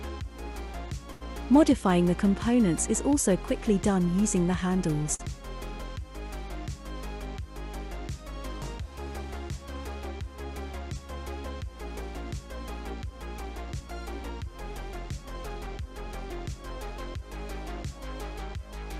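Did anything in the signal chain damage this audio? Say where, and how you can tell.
Yes. Network stage: short stalls from late packets at 1.11–1.23 s and 5.03–5.07 s, where the jitter buffer emptied and the receiver stretched held sound by 94 ms and 20 ms.

Network loss: short concealed packet loss at 5.15–5.21 s. About 40 ms never arrived, and extrapolated fill briefly smears the sound before blending back.

Jitter buffer speed-up from 13.71 to 17.22 s. The receiver trimmed pitch-period slices to run about 4% fast at unchanged pitch, dropping roughly 150 ms of excess delay.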